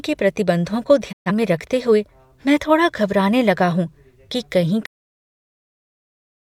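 At 1.11 s, just after "के प्रतिबंधों को", a digital broadcast dropout occurs. The receiver stopped getting valid frames and muted with a 20 ms fade. About 128 ms of the speech is lost, which fits roughly three discarded frames. Sound returns at 1.31 s with "में रखते हुए मैं".

At 4.86 s the clip shows a cut-off end. Right after "लगा हूँ कि कहीं" the speech stops mid-sound and falls straight to digital silence with no natural decay. The final buffers were never written, so the remaining audio is missing.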